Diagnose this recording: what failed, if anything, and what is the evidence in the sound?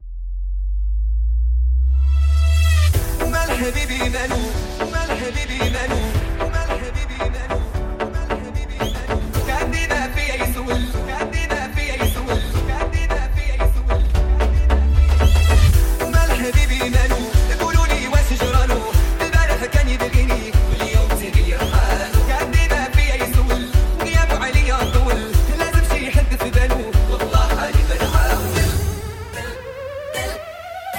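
A loud pop sits at 20.73 to 20.76 s: a single sharp transient that rises a few decibels above the surrounding level and lasts about 30 ms, while the sound carries on beneath it unbroken. The stage is likely the analogue wiring, where a connector disturbance or static discharge adds a sudden voltage pulse to the signal. The circuitry downstream shapes that pulse into the brief thump heard here.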